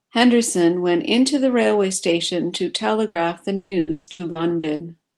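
At 3.07 to 3.18 s there is a burst of packet loss. About 80 ms of audio never arrived, and the receiver filled the hole by extending the last sound and fading it, producing a brief fill before the speech resumes with that stretch missing.

From 3.55 to 4.82 s comes repeated packet loss, with a robotic sound. Seven separate gaps, the longest 160 ms, are each patched by continuing the preceding sound, so nearly half of this span is concealed. The speech turns choppy, with pieces missing. Over the whole clip, the high end stops around 12 kHz, which fits an Opus call path running near 32 kbps.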